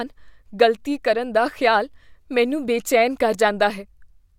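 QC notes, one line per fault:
No faults found in the speech clip. Nothing heard in it calls for a note.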